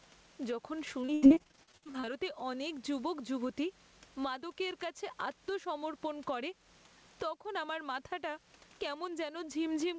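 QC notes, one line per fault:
throughout, gain pumping: the level is pulled down on each loud syllable, a gain swing of roughly 15 dB, most likely from gain set too high and a fast limiter.
1.02 to 2.09 s, repeated packet loss (robotic sound): rapid dropouts, the longest about 79 ms, patched by stretching the previous sound, so nearly half this stretch comes out choppy.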